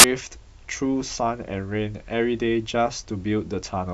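A hard-edged burst of very loud white noise fills the first 0.04 s: file tags played as audio, an embedded cover picture's compressed data read as speech samples.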